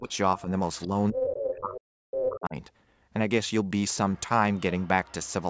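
From 0.0 to 0.5 s the speech is suppressed in double talk. It dips by about 10 dB for roughly 150 ms, likely because the echo canceller ducked the talker while the far end was also active. On a waveform the envelope pinches in. Between 0.09 and 0.41 s, the other side's voice leaks through faintly, about 25 dB down, likely from residual loudspeaker echo. It shows as weak, separate harmonic traces on a spectrogram.

From 0.74 to 1.81 s that leak grows to about 5 dB below the speech, and it returns from 2.12 to 2.26 s. From 0.87 to 2.56 s the speech is suppressed again, much harder. Drops reach about 40 dB across roughly 1.5 s, so the talker breaks into pieces. The waveform shows near-silent gaps, and the spectrogram shows columns emptied up to the 8 kHz ceiling of the call processing.

Faint leakage, about 30 dB down, recurs at 4.14–4.21 s and 4.57–5.33 s.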